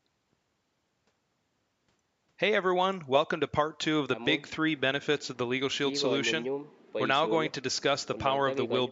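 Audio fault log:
No faults turn up in this speech, which has just the usual thin low end of call microphone processing and nothing above 8 kHz.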